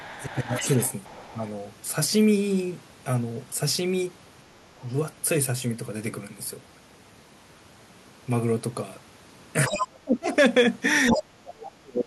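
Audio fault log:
0.0–0.67 s, 1.32–1.40 s, 9.68–10.29 s and 11.11–12.07 s: speech suppressed in double talk. The talker's level dips by about 20 dB, about 10 dB, then about 35 dB twice, thinning or cutting out. This is likely an echo canceller clamping down while both sides spoke.
0.02–1.51 s, 4.80–4.97 s, 9.67–9.76 s and 11.09–11.18 s: other side's voice leaking through. A second voice sits about 20 dB, 35 dB, 15 dB and 5 dB below the talker. It is likely loudspeaker echo that the canceller left in the microphone signal.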